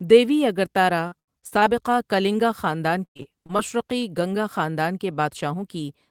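From 1.07 to 1.79 s, the speech breaks up with repeated packet loss, giving a robotic sound. Around seven short holes appear, the longest near 78 ms. Each is patched by stretching the last sound, so about 30% of that stretch is filler. The result is choppy. It returns from 3.05 to 3.61 s. Here there are roughly five holes, one lasting 105 ms, concealed over about a third of the span.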